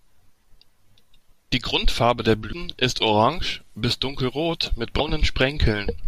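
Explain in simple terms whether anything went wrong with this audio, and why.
Two tiny glitches break into this speech recording, at 2.52 s, just before "ist orange bis dunkelrot", and at 4.99 s, just after it. Each is a quick blip. The cause is damaged data in a compressed stream. A bit of the stored file was wrong, so the decoder briefly lost its place and skipped ahead to the next good chunk.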